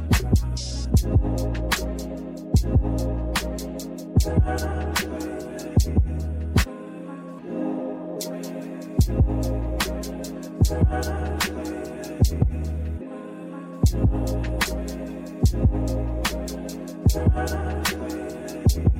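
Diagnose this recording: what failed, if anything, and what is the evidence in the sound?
Nothing failed in this recording, and the sound offers no evidence of any fault.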